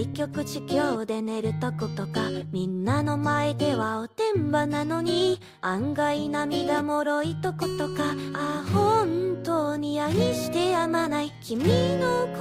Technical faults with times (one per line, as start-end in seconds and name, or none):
none